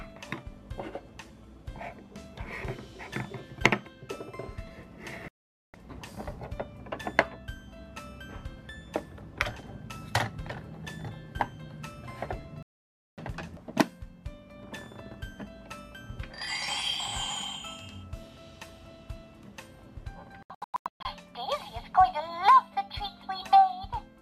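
At 5.28 s the audio mutes for about 0.46 s, and at 12.63 s for about 0.55 s. Both are digital broadcast dropouts: the receiver stopped getting valid frames and held silence until clean frames returned, so the programme picks up later and the missing material is gone. From 20.43 s to 21.06 s the dropout breaks into several short holes, the longest about 120 ms, totalling about 0.48 s of lost audio.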